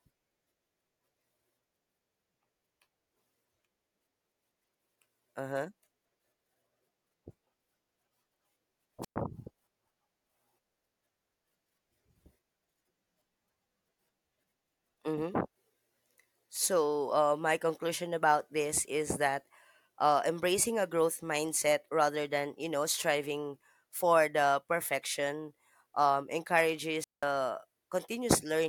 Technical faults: wireless microphone squelch dropout

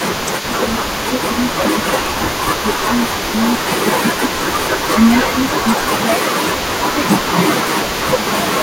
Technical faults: echo leak; speech suppressed in double talk

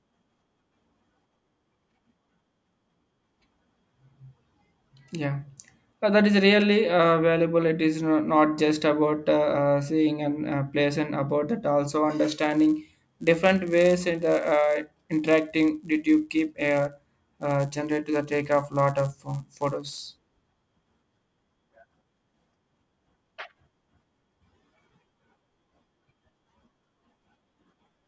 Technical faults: resampler restarted on every block

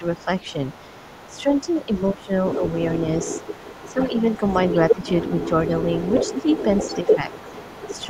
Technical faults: speech suppressed in double talk; other side's voice leaking through

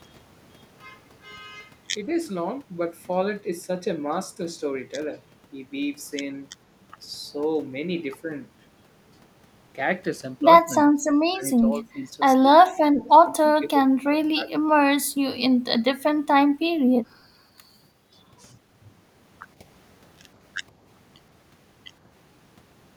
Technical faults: speech suppressed in double talk

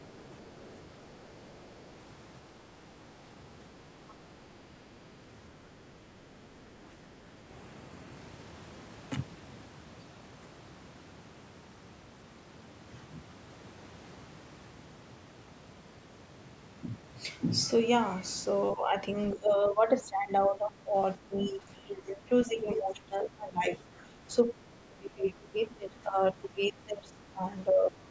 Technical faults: other side's voice leaking through; speech suppressed in double talk

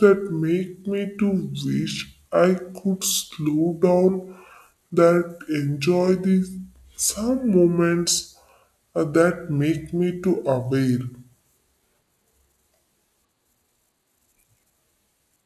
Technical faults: wrong sample rate

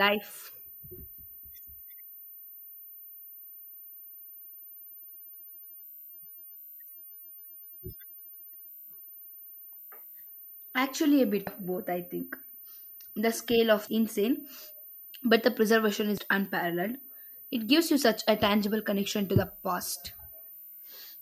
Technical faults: switching supply whistle; damaged data in a compressed stream

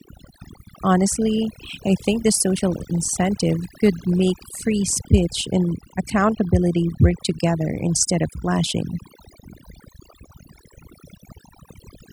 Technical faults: overdone noise removal

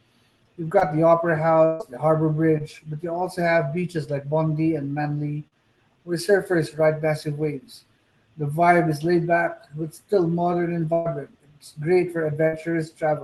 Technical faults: short concealed packet loss; burst of packet loss

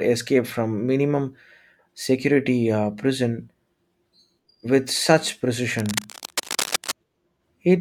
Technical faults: cable scratch noise

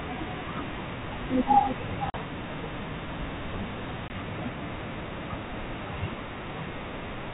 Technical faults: packet loss on an ADPCM call

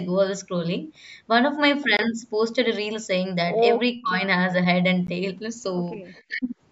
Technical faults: block of digital silence; speech suppressed in double talk; echo leak

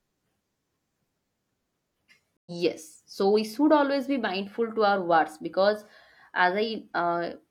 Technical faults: stream reconnect

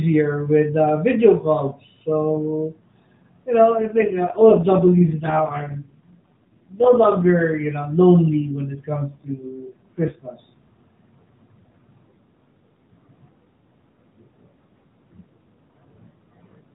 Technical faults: AMR rate drop

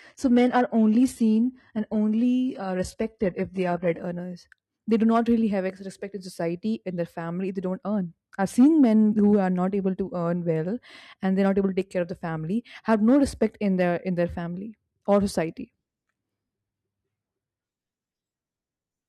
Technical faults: adaptive stream starting at a low bitrate

